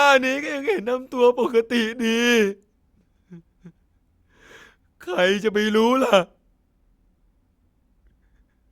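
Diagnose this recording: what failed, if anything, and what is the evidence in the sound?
Nothing failed in this speech recording. Listening through the whole clip, no stage from the analogue wiring to playback leaves an audible trace of a fault.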